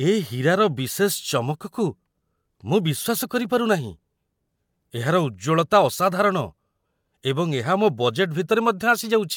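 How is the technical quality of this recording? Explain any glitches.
Nothing here jumps out as a glitch; the speech comes across without any audible technical problems worth flagging.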